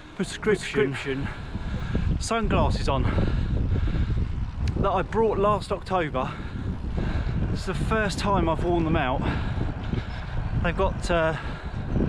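From the very start until 1.8 s, everything repeats about 300 ms later at roughly equal loudness, then stops abruptly: a doubled audio track, likely from a second, slower capture path.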